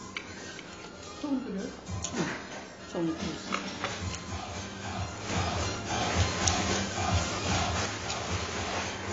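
From the start, the sound is dull and smeared, with nothing above 7.7 kHz and a plainly audible warbling, fizzy texture. This is likely AAC compression at a low bitrate around 24 kbps, as the encoder discards high bands and coarsely quantises the rest. Unlike simple low-pass filtering, it adds swirling artefacts rather than just darkening.

At 5.29 s a sudden gain jump lifts the level by about 6 dB in a single step, and at 7.86 s it drops back just as abruptly. It is likely a digital gain change applied without a ramp. Unlike a compressor or fade, there is no gradual movement, and the background noise rises and falls together with the foreground sound.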